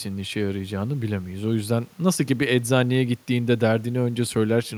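A short speech recording with no technical faults to report. Nothing at any point in it calls for a time or a cause.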